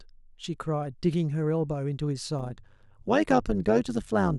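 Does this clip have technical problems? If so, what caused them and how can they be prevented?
Yes. From 2.39 s to the end, overlap-add ripple pulses the speech level by about 11 dB at around 100 Hz. Frames were rejoined with an overlap whose gains don't sum evenly, so the loudness dips once per frame. Unlike codec warble, the ripple is a steady, periodic metallic buzz rather than smeared tone. Using matched analysis and synthesis windows at an overlap that sums to constant gain prevents it.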